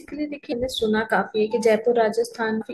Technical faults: damaged data in a compressed stream

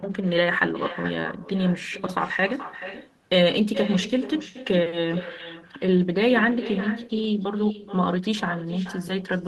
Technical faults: echo with no canceller

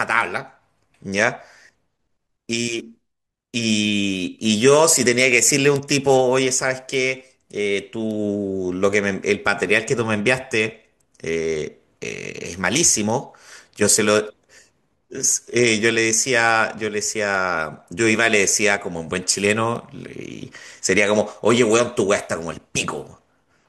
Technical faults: bit error spike

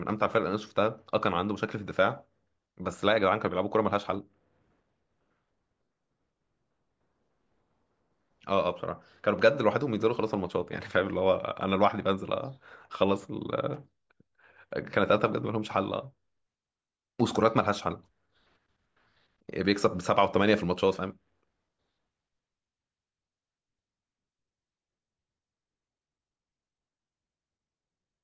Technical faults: none

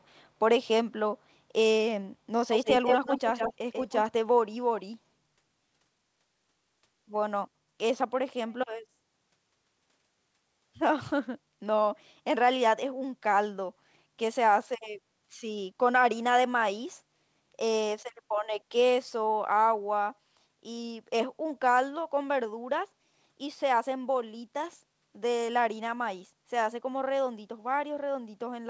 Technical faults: echo leak

